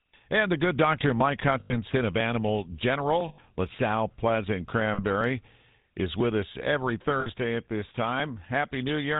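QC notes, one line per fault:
Throughout, GSM full-rate codec. The speech has a buzzy, gravelly roughness, and the damage is plainly audible. The codec models the vocal tract and drives it with a sparse, regular pulse train, keeping only one excitation sample in three. That coarse excitation is what grinds against the voice. Nothing above 4 kHz survives, so the speech sounds dull and narrow. The character fits the 13 kbps full-rate coder.
1.6 to 1.75 s, 3.28 to 3.39 s, 4.94 to 5.01 s, 7.2 to 7.27 s: lost GSM frames. At each point the sound freezes into a rough, metallic ring instead of continuing. The decoder replaces each missing frame by repeating the last good frame's settings. The first two gaps hold about 100 ms, which points to five 20 ms frames. The third holds about 40 ms and the fourth about 60 ms. None lasts long enough to fade fully to silence.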